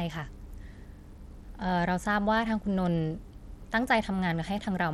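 Bluetooth SBC compression, heard throughout: the speech has flickering, dropping treble with a gritty grain and aliasing riding on it, likely from a small bit pool that starves the upper sub-bands and coarsely quantises the rest, which fits a bitrate near 96 kbps.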